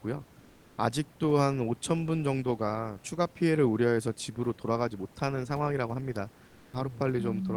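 Speech, with two faults. From 0.39 to 0.77 s there's sound dropped by the voice detector: about 380 ms gets swapped for steady noise, roughly 320 ms of real speech lost, likely because the Opus DTX detector mistook part of the speech for background and stopped sending until it retriggered. Later, from 6.45 to 6.73 s, comfort noise stands in for the background for about 280 ms. The room noise, sitting about 28 dB under the speech, turns into a flat, featureless hiss about 1 dB quieter, likely Opus DTX filling a pause with synthetic noise.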